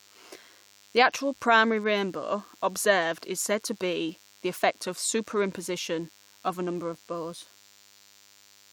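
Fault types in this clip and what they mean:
DECT cordless phone buzz: A thin, steady buzz runs under the speech for the whole clip. Its 100 Hz repetition matches the 10 ms radio bursts of a nearby DECT handset or base. The audio circuit rectifies these bursts into sound with many harmonics. It sits roughly 30 dB below the speech.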